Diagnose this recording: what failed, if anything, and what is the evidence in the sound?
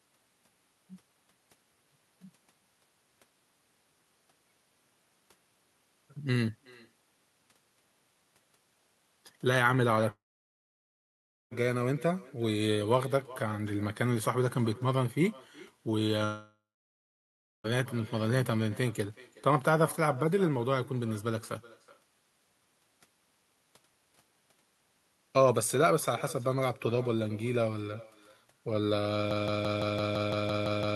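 Echo with no canceller runs through the whole speech clip: every phrase is trailed about four tenths of a second later by a thinner copy about 21 dB down. The far end's loudspeaker is feeding its microphone, and call processing never subtracts it.

Long network dropouts occur at 10.11–11.53 s and 16.25–17.66 s. Each loses about 1.4 s of speech: a brief fading buzz or hiss continues the last sound, then silence for about 1.33 s and 1.05 s respectively. The likely cause is packets that never arrived, so the receiver concealed and then muted.

A broken-record loop starts at 29.31 s and lasts to the end: a 169 ms fragment repeats back to back, identically, and the speech that belonged there is gone. The likely cause is a stalled player or stream resending its last buffered fragment.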